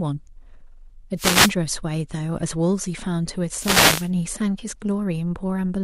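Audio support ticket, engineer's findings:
Wireless microphone noise hit, 1.16–1.53 s and 3.52–4.10 s. Analogue FM radio link fading as reflected paths cancel at the receiver; receiver noise floor rises through the dropout. Heard as short static bursts, about 0.4 s and 0.6 s.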